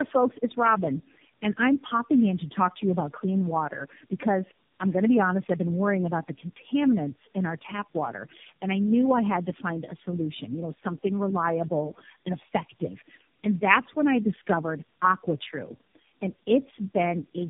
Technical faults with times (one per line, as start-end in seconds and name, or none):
0.00-17.49 tandem speech coding